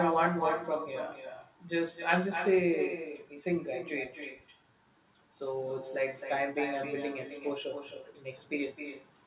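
Speech with an echo that has no canceller, present from start to finish: every phrase returns roughly 300 ms later as a copy about 8 dB quieter and thinner, because the far end's loudspeaker feeds its microphone and nothing removes it. On a waveform each burst of speech trails a smaller delayed twin; a spectrogram shows each harmonic stack repeated a fraction of a second later, fainter, all within a band that stops at 4 kHz, consistent with a narrowband G.711 call path.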